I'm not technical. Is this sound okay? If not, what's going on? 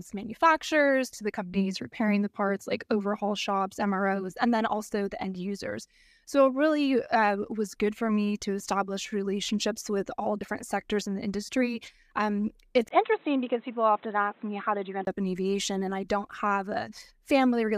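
No. From 12.89 to 15.07 s the speech turns dull and boxy after a tiny gap, with faint new background noise: likely an input switched to a poorer device, not a volume drop.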